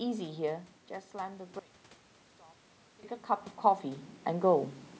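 The clip is speech. Between 1.59 and 3.03 s the level collapses by about 24 dB, and what remains sounds faint. The likely cause is one channel inverted. One stereo side has flipped polarity. When the two sides are summed to mono, everything they share cancels. Centred speech and low bass all but disappear. Only the small difference between the channels survives. Full level returns at 3.03 s.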